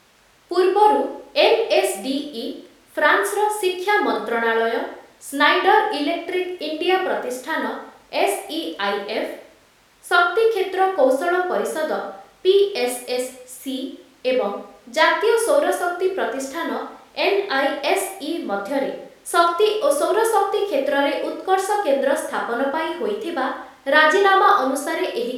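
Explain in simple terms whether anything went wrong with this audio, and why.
Listening to the speech, nothing stood out as having gone wrong.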